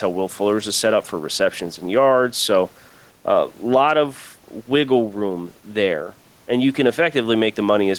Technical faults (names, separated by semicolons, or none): gain pumping